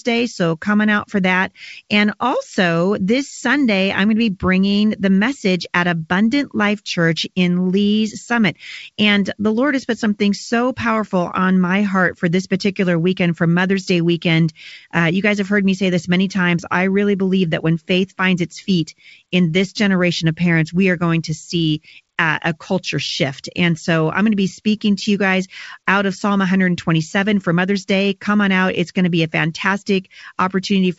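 Nothing stood out on listening to this speech, which has the band-limited character of G.722 wideband telephone coding, with no content above about 7.7 kHz.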